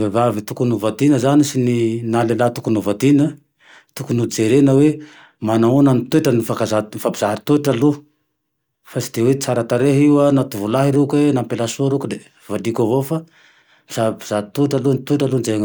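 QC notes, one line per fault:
No faults found.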